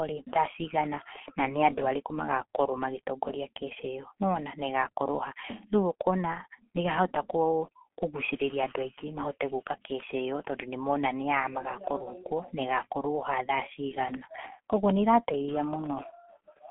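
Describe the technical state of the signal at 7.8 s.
At 7.8 s the speech carries G.723.1 codec damage, present from start to finish rather than just at that moment. The band is confined to roughly 250 Hz to 3.4 kHz, with nothing above 3.8 kHz. The coding is heavy, which fits a bitrate around 6 kbit/s. The codec rebuilds speech from a vocal model updated only once per 30 ms frame, so the sound is muffled and hoarse, and consonants are smeared.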